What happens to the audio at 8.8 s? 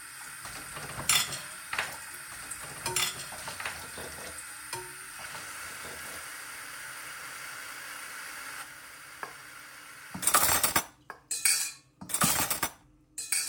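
At 8.8 s, as through the whole clip, every sound returns about two seconds later in a dry, full-band copy roughly 5 dB quieter, with no decay or room colour. This doubled audio track is likely a second capture through a slower path, mixed back in.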